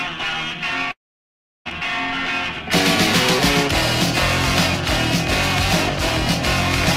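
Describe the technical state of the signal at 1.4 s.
At 1.4 s the signal sits inside a long network dropout running from 0.91 to 1.67 s, most likely packets failing to arrive. The receiver briefly extends the last sound, which fades into near-silence for about 0.7 s, and the audio resumes at 1.67 s with roughly 0.74 s missing.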